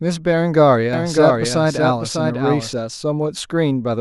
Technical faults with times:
0.93-2.73 doubled audio track

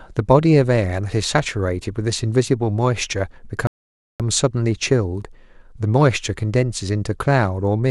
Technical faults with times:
3.67-4.20 rebuffering stall

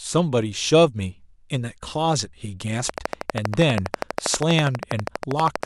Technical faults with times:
2.89-5.64 train of clicks

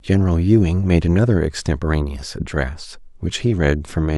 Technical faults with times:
none

